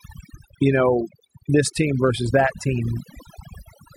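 Throughout the speech, overdone noise removal switches off bands near the estimated noise floor, taking quiet parts of the voice with them, over twinkling near-silence; a spectrogram shows scattered isolated specks.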